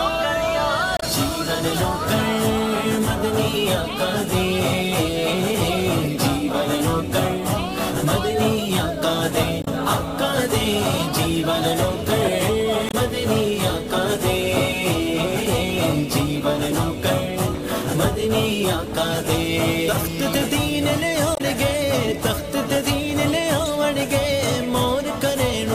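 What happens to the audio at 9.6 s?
Damaged data in the compressed stream hits from 9.61 to 9.68 s. The decoder loses sync on the bad frames, giving a brief glitch.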